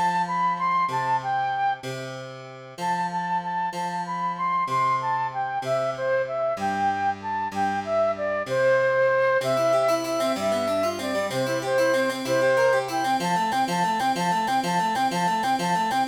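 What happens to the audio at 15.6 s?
At 15.6 s the audio is stuck in a broken-record loop: the same fragment of about 0.48 s plays back to back, exactly repeated, from 13.53 s to the end of the clip, cycling five times. Whatever should have been heard in that stretch never arrives. The likely cause is a stall in the player, encoder or stream, which kept resending the last fragment it had buffered instead of moving on to fresh audio.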